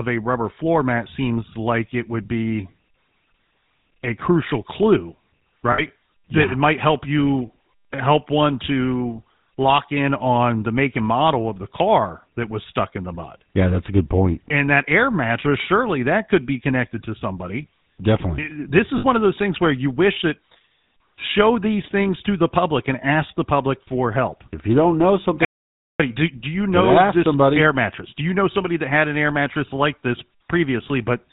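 Throughout, the speech passes through the GSM full-rate codec, which rebuilds the voice from a pulse-driven vocal-tract model at a rate that fits 13 kbps, cutting everything above 4 kHz and leaving a plainly audible buzzy, gravelly roughness. At 5.72 s, just after "a crucial clue", lost GSM frames are covered by repeating the last good frame for about 60 ms, which fits three lost frames. This is heard as a brief rough, metallic ring. The same concealment recurs at 18.98 s for another 60 ms, just before "one of those things". At 25.45 s, after "you don't know something", the input was likely lost and silence was written, so the audio drops out to silence for 0.54 s, with no room tone in the gap, before returning.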